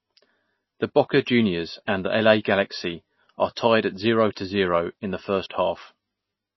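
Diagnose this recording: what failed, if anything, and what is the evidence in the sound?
MP3 compression, throughout, at the codec stage: the speech has nothing above 5.8 kHz and a plainly audible watery swirl, which points to a very low bitrate near 24 kbps. Starved of bits, the encoder likely cut the treble and toggled weak frequency lines between frames.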